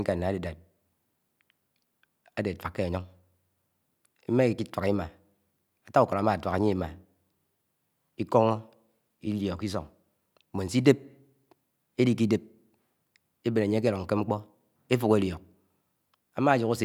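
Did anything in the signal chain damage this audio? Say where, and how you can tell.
No, nothing in the chain from capture through playback has left an audible mark on this speech.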